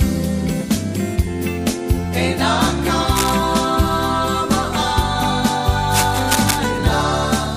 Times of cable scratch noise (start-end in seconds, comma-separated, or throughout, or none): 3.11-3.36, 5.94-6.59